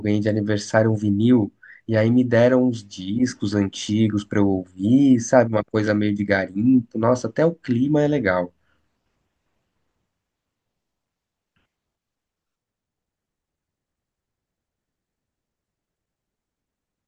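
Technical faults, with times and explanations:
No technical faults can be heard anywhere in the speech, with the signal holding steady in level and continuity throughout.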